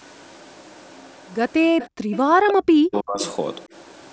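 Speech recorded through call processing, with the band topping out at 8 kHz, and the trouble clusters around the middle. At 1.78–1.87 s and again at 2.12–2.19 s you get faint scraps of a delayed copy of the voice, trailing by 324 ms and sitting roughly 20 dB under the main speech. That's likely an echo leak, where the far end's loudspeaker output got past its echo canceller and came back. Between those, from 1.92 to 2.04 s, the room background is gated by the echo canceller: it plunges by about 40 dB for roughly a tenth of a second, then snaps back once the canceller releases. From 2.32 to 3.21 s the talker's own voice dips and breaks up, losing as much as about 40 dB over roughly 0.7 s in total. That pattern is most likely speech suppressed in double talk, with both sides talking at once and the canceller clamping down on both its own talker and the echo.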